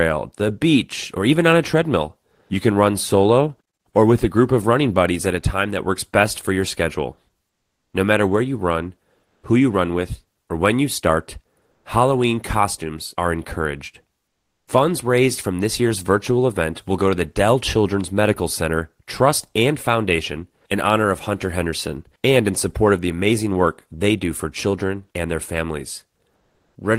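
Between "matter where you run" and "who you run with" (9.25 to 9.43 s), after "you start" (11.71 to 11.85 s), after "costumes are encouraged" (14.27 to 14.67 s), and at 26.35 to 26.75 s, the room tone gives way to comfort noise in place of the background. Each gap lasts 140 to 400 ms. The texture goes flat and featureless. Its level shifts by about +4, +2, -17 and -2 dB respectively, with the largest drop at 14.3 s. This is likely discontinuous transmission, with synthetic noise filling the pauses.

At 14.63 to 14.67 s, the sound following that dip has its onset clipped by the voice detector. About 40 ms of its beginning is missing, so it starts abruptly with no soft attack, likely because the detector resumed transmission late.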